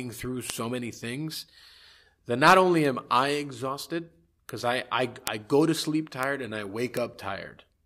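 Bit error spikes occur at 0.50, 2.85 (after "that not only"), 4.49 (after "only am I exhausted"), 5.27, 6.23 (after "I go to sleep") and 6.97 s. Each is a single flipped bit that throws one to three samples to a value a power of two away and back again. Each is heard as an isolated broadband tick that ignores the speech. Peaks run from about -19 dBFS to about -1 dBFS at 5.27 s.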